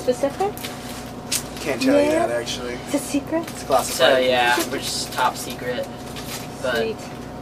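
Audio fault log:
Nothing stood out on listening.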